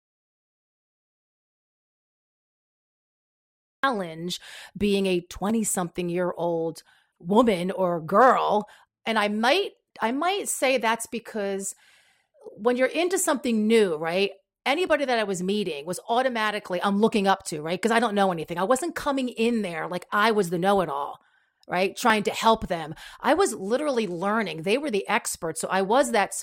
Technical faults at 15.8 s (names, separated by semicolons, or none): none